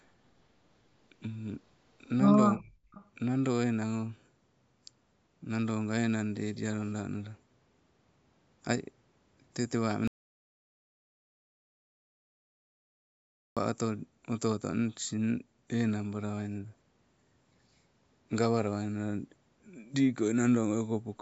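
A speech recording, band-limited by call microphone processing with nothing above 8 kHz. From 2.57 to 2.73 s the voice dips sharply, by roughly 30 dB, and then recovers. This is likely speech suppressed in double talk: the level is pulled down rather than cut to digital silence. From 2.92 to 3.05 s a faint copy of the speech, roughly 30 dB down, returns about 335 ms later. This is likely an echo leak, and the repetition of earlier sound sets it apart from a reverberant tail. From 10.08 to 13.57 s, about 3.5 s, the audio drops to complete silence with no room tone. This is likely an audio dropout to silence from lost input, and that silence with no room tone left distinguishes it from suppression.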